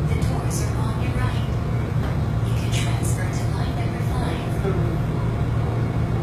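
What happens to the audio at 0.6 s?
At 0.6 s the treble has a gritty, metallic quality that runs through the whole clip, likely HE-AAC compression at a very low bitrate, around 20 kbps. The upper bands are rebuilt by copying lower ones upward, so harmonics misalign. A spectrogram shows smeared, repeated high-band texture and a hard ceiling at 14.9 kHz.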